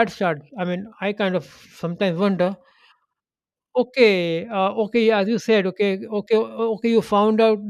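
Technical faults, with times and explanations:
No technical faults can be heard in this speech.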